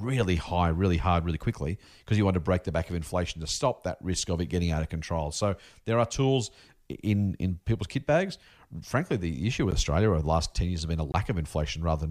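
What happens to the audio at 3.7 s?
Nothing goes wrong at 3.7 s; the speech carries on through that moment with no dropout, click, distortion or other fault.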